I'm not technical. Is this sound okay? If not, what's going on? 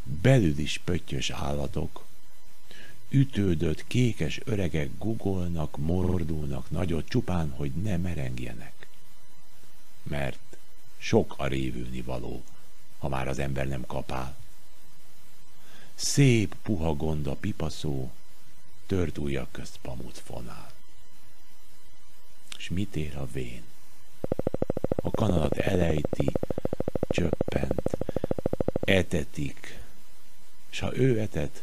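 No. In three places, repeated frames occur: a small chunk of the recording was stored more than once, so it plays again. At 6.02 s a tiny slice repeats three extra times, at 23.80 s a slice twice as long repeats twice, and at 29.56 s one repeats once. Each sounds like a brief stutter.

From 24.24 s to 28.92 s there is a train of clicks, likely from electrical interference or a struggling recording connection. That produces a steady ticking, about 13 clicks per second, over the sound.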